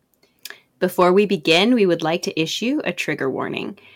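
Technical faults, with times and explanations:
0.84 to 1.62 s, hard clipping: the louder parts of the speech in this stretch take on a gritty distortion that stops once the passage ends. The signal was driven about 5 dB beyond what one stage in the chain could pass, so every peak above that limit was sliced flat instead of following its true shape. Those squared-off tops create new harmonics far above the original content, and that added high-frequency energy is what makes the distortion audible.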